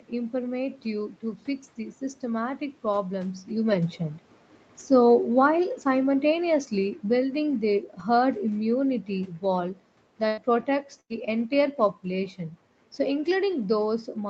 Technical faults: automatic gain falling; burst of packet loss; lost packet rebuilt from error correction

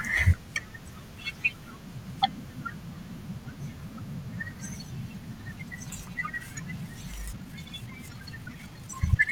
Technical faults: time-stretched section

